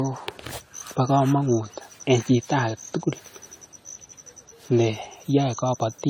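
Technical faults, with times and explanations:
Throughout: generation loss. The speech sounds swirly, smeared and hollow, worse than one pass of lossy coding would leave it. Consonant attacks are blurred. The likely cause is repeated decoding and re-encoding, about five times over, in a way that fits AAC-LC at around 64 kbit/s. Each pass quantises again on a shifted frame grid. Its noise and spectral holes pile onto those left by earlier passes. Nothing reaches above 20 kHz.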